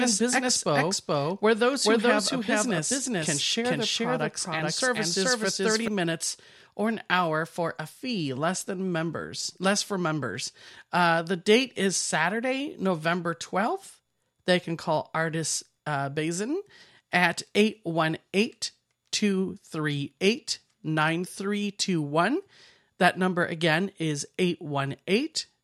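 A speech clip, and from the very start up to 5.88 s it has a doubled audio track: a second full-band copy trails about 400 ms behind at roughly the same level, then drops out abruptly just before "minutes or an hour". Likely a second, slower capture path mixed in.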